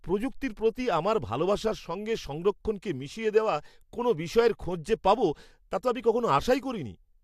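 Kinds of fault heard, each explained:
Nothing stood out on listening to the speech in this recording.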